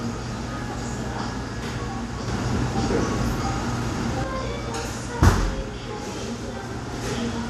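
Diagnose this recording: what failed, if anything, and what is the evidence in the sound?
Between 2.28 s and 4.24 s the sound and its background step up together by about 5 dB: a sudden gain jump, likely digital gain switched without a ramp.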